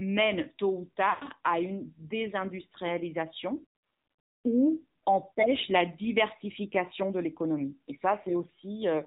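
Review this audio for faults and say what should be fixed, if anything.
The whole clip has gone through the AMR narrowband mobile codec, and it's plainly audible. Everything above 4 kHz is gone, and the speech has that buzzy, synthetic edge you get when the coder rebuilds the voice from a vocal tract model plus a few excitation pulses per subframe. The degree of damage fits a low mode, around 7.4 kbps. To prevent it, capture or route the call over a wideband or higher-rate path rather than the narrowband mobile leg.

There are also lost AMR speech frames. From 1.10 to 1.26 s the sound smears and fades out, as the decoder keeps repeating the last good pitch and spectral settings with dropping gain. That gap is about 120 ms, which sounds like six frames in a row. A shorter dip follows at 8.22 to 8.27 s, consistent with a single lost frame. Both come from corrupted frames failing their check over the radio link. 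To prevent it, record on a stronger, more stable connection, or enable stronger error protection on the link.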